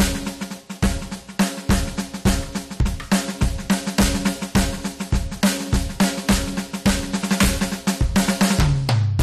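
Music, hard clipped from start to finish. The signal is driven about 18 dB beyond what the stage can pass. Its peaks are sliced flat at the ceiling. Roughly 7 percent of the waveform sits at that limit. The flat tops add harmonics high up the spectrum. With overload this large, every loud moment carries a harsh fuzz, not just occasional crackle on peaks.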